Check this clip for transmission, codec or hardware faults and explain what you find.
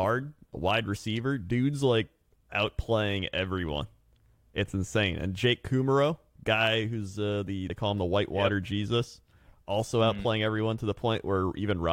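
Two short skips in the speech come from compressed frames skipped, one at 0.95 to 0.97 s and one at 7.69 s, between "guy who's uh the" and "call him the." At each point whole coded frames never reach the output, so the audio jumps ahead. That is roughly 20 ms the first time and about 70 ms the second, which fits losing one and then three frames of about 23 ms each.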